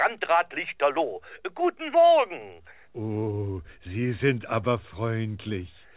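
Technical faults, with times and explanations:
No technical faults, so there are no times or explanations to give.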